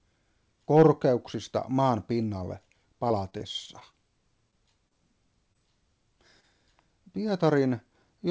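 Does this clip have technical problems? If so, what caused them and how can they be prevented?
Yes. The audio passed through a G.722 call path at 64 kbps, with nothing above 8 kHz. It shows packet-loss problems in five places.

Repeated packet loss (robotic sound) runs from 3.08 to 3.95 s. Six gaps hit in quick succession, the longest 21 ms. The receiver patched about 110 ms by extending earlier sound, and 60 ms is gone. The result is choppy, with pieces missing. Better network quality or redundancy such as FEC would prevent this.

A short stall from a late packet occurs at 4.51 to 4.55 s. One packet arrived 18 ms late and the jitter buffer ran dry. The last sound was held for 18 ms, and nothing was lost. A slightly deeper jitter buffer would absorb this.

Short concealed packet loss happens at 4.89 to 4.93 s, 5.53 to 5.57 s and 6.41 to 6.45 s. Each time 20 ms never arrived. About 17 to 23 ms was synthesised from the preceding sound, leaving a brief smear. 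A steadier network path or in-band FEC would prevent these.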